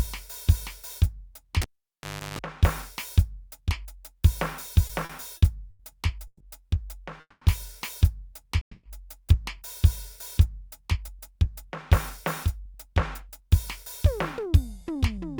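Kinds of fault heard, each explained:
Cable pulled and plugged in: at 1.62 s a pop cuts the music for about 720 ms. Then comes roughly a third of a second of 50 Hz mains buzz as the plug half-seats, and a second pop by 2.39 s when the signal comes back.
Repeated stalls (stutter): between 4.87 and 5.82 s the stream keeps running dry. Four short holes, the longest 90 ms, get papered over by stretching the last bit of sound, about 200 ms in all. Nothing's lost, but the music drags and hiccups.
Call audio freeze: at 6.27, 7.20 and 8.61 s the music hangs for 130, 210 and 220 ms. The last sound is carried on and fades toward silence before playback picks up exactly where it stopped. The likely cause is packets held up en route, emptying the receive buffer.
Jitter buffer speed-up: from 14.11 s to the end the receiver trims tiny pitch-period slices to work off backlog, around a tenth of a second in total. 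The music runs about 6% fast at unchanged pitch and the tempo feels rushed.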